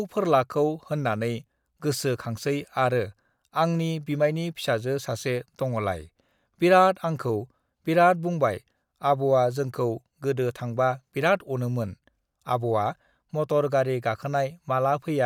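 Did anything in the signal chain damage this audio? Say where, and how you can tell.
No, nothing in the chain.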